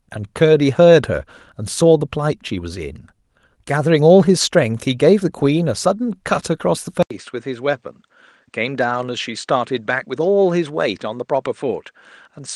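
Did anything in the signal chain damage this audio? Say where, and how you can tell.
Yes. At 7.03 s the input stage likely switched to a poorer device, and the capture stays on it until the end. An 80 ms silence marks the switch. After it the speech turns duller, with a narrower band than the 12 kHz the call codec's band had reached. The level drops by about 5 dB, and a faint new noise floor appears roughly 50 dB below the speech. The replacement device's narrower response, gain and self-noise account for all of this.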